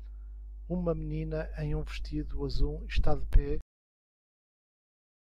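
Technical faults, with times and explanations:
3.61–5.31 s, cut-off end: the speech stops abruptly at 3.61 s, partway through a sound, and the remaining 1.7 s is flat digital silence. There is no natural decay or room tail, only an instant drop to silence. This happens when the final buffers of audio are never written to the file or never reach playback, so the recording is truncated rather than ending on its own.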